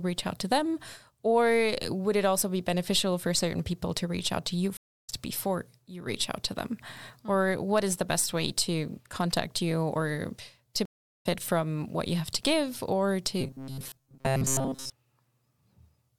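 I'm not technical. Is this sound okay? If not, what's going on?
No. There are two kinds of problems.

The first is a stream reconnect, which happens twice. From 4.77 to 5.10 s, and again from 10.85 to 11.26 s, the sound drops out. The first gap is about a third of a second, the second a little longer. Each time the connection broke and the player started over. When the speech comes back, it has jumped ahead by roughly a third of a second, so a small piece is missing.

The second is robotic sound from repeated short buffers, from 13.41 to 14.93 s. The voice turns into a stiff, metallic buzz pitched at 134 Hz, though it still loosely follows the speech. The likely cause is new audio arriving too slowly. The player fills the gap by replaying tiny slices, each about 7.5 ms long, which fits that buzz. Most of the real speech in that stretch is skipped.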